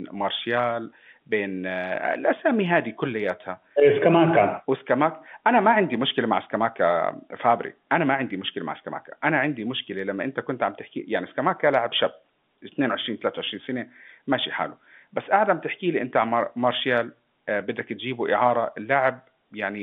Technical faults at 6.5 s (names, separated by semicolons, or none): none